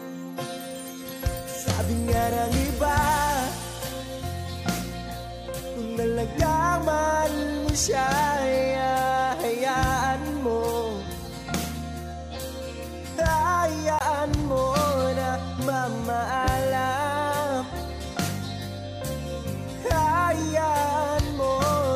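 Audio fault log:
13.99–14.01 s, CD skip: a short tick and a mute of around 20 ms, after which playback resumes from a different point. The laser jumped to another turn of the disc's spiral, so the audio breaks continuity instead of simply dropping out.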